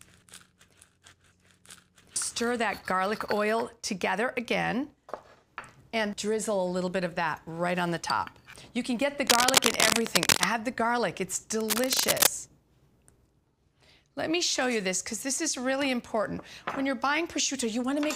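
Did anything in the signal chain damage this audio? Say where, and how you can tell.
Yes, in the analogue wiring. Cable scratch noise appears from 9.27 to 10.44 s, around 5 dB louder than the sound itself, and again from 11.60 to 12.27 s at about the same level as the sound. Each burst is a dense, irregular rustle lasting roughly 0.7 to 1.2 s, likely from a worn cable or connector being moved so its contact resistance flickers. Unlike a single dropout click or steady hum, it comes in ragged, grainy clusters.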